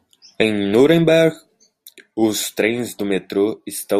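No technical faults can be heard anywhere in this speech recording. Nothing in the signal chain calls for comment at any point.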